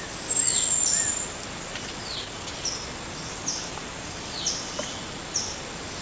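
At 1.68 s there is a skip ahead: about a second of audio was discarded while later audio was already queued, so playback jumps forward with no gap. The waveform shows an abrupt splice with no silence, and the spectrogram shows an instant change in pattern.

From 1.77 s to 3.52 s a jitter buffer speed-up follows, as the receiver trims the backlog by cutting out short pitch-period pieces, about 0.3 s in total. Playback runs at 117% with unchanged pitch and sounds hurried. The spectrogram looks horizontally compressed, and the G.722 call path's ceiling at 8 kHz remains.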